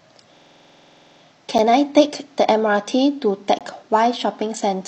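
The system froze from 0.37 to 1.21 s while the hardware kept replaying one ring buffer, a system hang loop that fits a 2048-sample buffer. The sound repeats one 46 ms slice 18 times, a rattling stutter at 21.5 Hz. Later, segment time stamps left small gaps between stream segments that the player filled with silence: a hard-edged 6.8 ms hole at 1.58 s and a 20.8 ms hole from 3.59 to 3.61 s.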